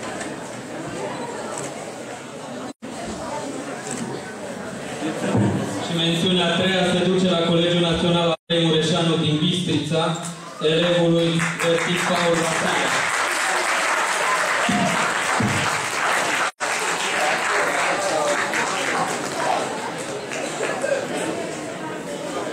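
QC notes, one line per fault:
2.70–2.85 s, 8.33–8.52 s, 16.48–16.63 s: AAC frame loss with muting. Three short, soft-edged dropouts, about 130 to 170 ms each, consistent with three or four missing frames. The decoder zeroes their spectrum, so overlapping windows fade the sound out and back in.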